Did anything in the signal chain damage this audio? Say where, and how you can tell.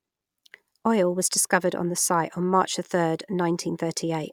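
No, nothing in the chain.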